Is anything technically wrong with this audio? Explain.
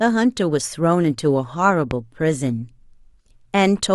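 Yes. A loud pop occurs from 1.91 to 1.94 s, about 10 dB above the speech. A voltage spike was likely added to the signal. The speech continues underneath.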